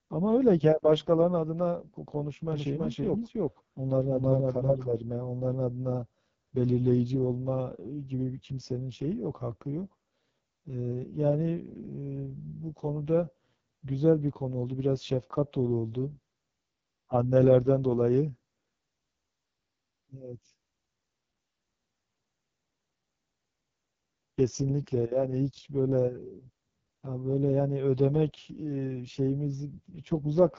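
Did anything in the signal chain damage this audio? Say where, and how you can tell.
Yes. The codec stage ran AMR wideband (HD Voice) at its lowest rates throughout. The speech is rough and raspy, which points to the lowest rate, about 6.6 kbit/s, and there is nothing above 7.3 kHz, where the codec's band ends.

From 2.52 to 4.84 s a doubled audio track is heard. A second, full-band copy about as loud as the original trails by roughly a third of a second, with no decay or room colour, and it starts and stops abruptly. The likely cause is a second, slower capture path or an edit holding two out-of-step copies.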